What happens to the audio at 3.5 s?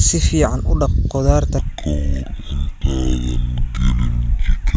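At 3.5 s the speech is inside a wrong sample rate fault lasting from 1.58 s to the end. The samples play at half the rate they were captured at, which fits 32 kHz audio played at 16 kHz with no conversion. The voice runs at half speed and sits a full octave (12 semitones) lower, sounding slow and deep.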